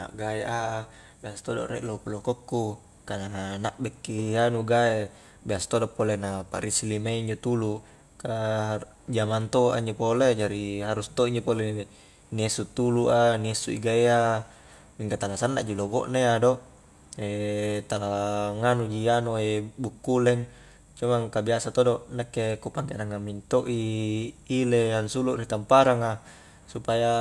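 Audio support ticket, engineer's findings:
Nothing stood out on listening.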